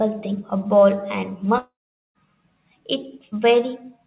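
From 1.58 to 2.18 s the speech dissolves into a fading buzz, then near-silence, and resumes with part missing, likely a long network dropout.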